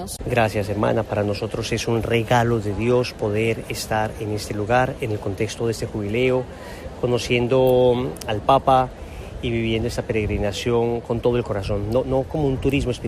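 No technical faults can be heard anywhere here.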